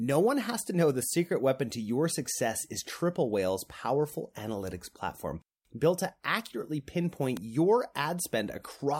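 At 7.37 s, just after "platform built to accurately", a single sharp snap lasting only a couple of milliseconds sits on top of the speech, peaking around -20 dBFS. This electrical switching spike was likely picked up from a nearby switch arc. Unlike a dropout, the speech underneath carries on without a gap.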